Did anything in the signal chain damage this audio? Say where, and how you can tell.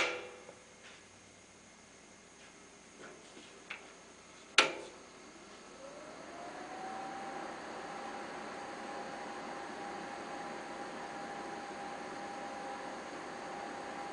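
No, nothing in the signal chain left audible damage here: the signal runs without any disturbance that would point to a fault at any stage.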